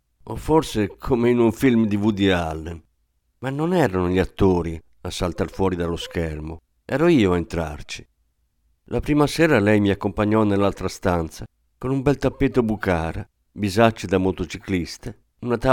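A speech recording, and nothing is technically wrong with it.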